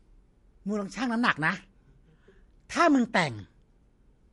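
Throughout the speech, nothing is present above about 11.3 kHz, and the low-bitrate MP3 artefacts remain. This is likely low-bitrate audio saved at a high bitrate: the sound fits an MP3 near 48 kbit/s re-encoded around 192 kbit/s, which cannot restore what was discarded.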